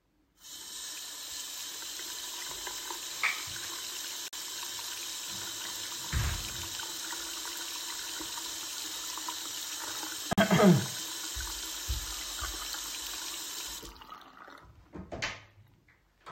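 At 4.28 s and again at 10.33 s the sound drops out for about 48 ms, leaving a short hole. The two holes are about 6.05 s apart. This is a gap between chunks: the audio was delivered in 6-second pieces, and silence was inserted at each join. The material on either side continues without anything missing, so the effect is a brief interruption rather than lost sound.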